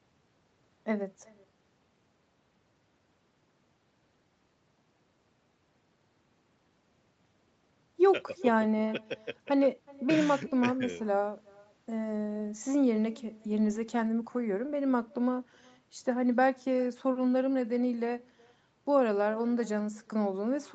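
Throughout, each phrase is shadowed by a faint, thin copy about 28 dB down, roughly 0.4 s late. This is echo with no canceller: the far loudspeaker's sound returns uncancelled.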